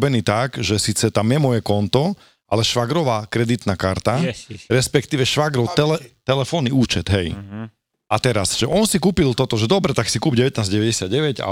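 Brief stutters or clicks interrupt the speech at 2.70 s after "je moje konto ale", at 5.71 s after "karta yes respektíve švagrov", and at 8.73 s before "si kúpil toto že". These are overlapping chunks: the audio was handled in 3.0 s blocks that each began about 13 ms before the previous one ended, so that sliver plays twice at every join.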